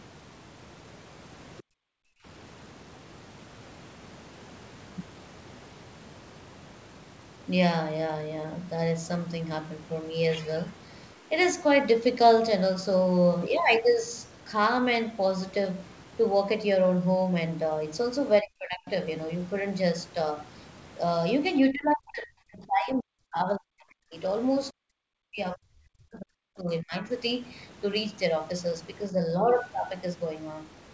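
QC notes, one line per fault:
1.58–1.62 s, other side's voice leaking through: for about 40 ms, a faint second voice slips into the microphone channel, far below the talker at roughly 30 dB down. This is likely residual echo: the device plays the far end on a loudspeaker, and the echo canceller did not fully subtract that playback before sending the signal on.
1.62–2.25 s, background gated by the echo canceller: immediately after that leak, the canceller clamps the microphone hard, pulling the room sound down by as much as about 40 dB for roughly 0.7 s. With the loudspeaker active, the suppressor treats the whole pickup as probable echo and mutes it. The background drops into near silence, then comes back once the canceller releases.
18.41–18.88 s, 21.71–24.15 s, 24.71–27.04 s, 29.11–29.4 s, speech suppressed in double talk: the talker's level sags and breaks up in these spans, by up to roughly 40 dB in the first three and only a few dB in the last. 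The two longer spans each lose around two seconds of speech in pieces. The likely cause is both sides talking at once: the canceller cannot tell local speech from loudspeaker echo, so it attenuates both, leaving the talker dipping, dulled or cut.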